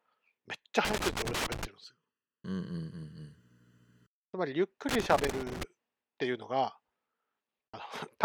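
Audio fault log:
0.85–1.65 s, loose connector crackle: a ragged burst of scratchy crackle sits on top of the speech for just under a second. It sounds like a worn or dirty contact jiggling, so the connection keeps making and breaking. The signal gets chopped into fragments, and any DC sitting on the line turns each break into a little pop. That's why it comes out irregular and gritty rather than as a steady buzz.
1.84–4.22 s, channel delay (comb filtering): for a couple of seconds the speech goes hollow and phasey. One channel is running late by under a millisecond, roughly 0.7 ms, and the two get summed to mono. Anything common to both channels cancels at evenly spaced frequencies. The first notch lands somewhere around 700 Hz, and the rest repeat up the spectrum, which produces that fixed scooped-out coloration.
4.89–5.63 s, loose connector crackle: the same contact trouble comes back for about three quarters of a second. 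The connection is breaking up again, so you get that irregular scratchy crackle over the speech.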